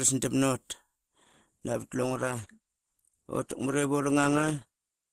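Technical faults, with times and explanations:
1.08 to 5.12 s, adaptive stream at a lower bitrate: at 1.08 s the speech suddenly turns duller and grainier, with nothing left above 12.2 kHz, yet there is no gap or dropout. The connection slowed and the player switched to a cheaper encoding, which fits Opus falling from 64 to 16 kbit/s. With fewer bits, the codec discards the treble and approximates what remains, raising artefacts until the clip ends.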